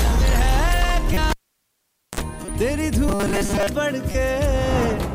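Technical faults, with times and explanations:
1.13–1.17 s, 2.45–2.52 s, 4.12–4.15 s: corrupt frame decoded. A few damaged compressed frames each time, played with misread values, giving brief chirps and noise bursts.
1.30–2.21 s: cable pulled and plugged in. A pop, about 0.86 s of near silence, a short 60 Hz mains buzz of about 50 ms as contact returns, then a second pop.
3.08–3.67 s: robotic sound from repeated short buffers. A rigid metallic 200 Hz buzz, most of the real audio skipped, likely from a 5 ms buffer being repeated while new audio arrives too seldom.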